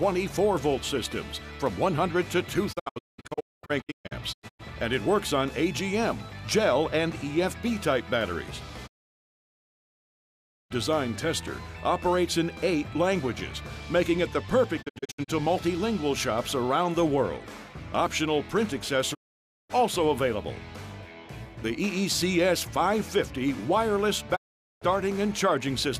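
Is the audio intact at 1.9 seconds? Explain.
Yes, the audio is intact at 1.9 seconds, with no dropout, glitch or other fault at that moment.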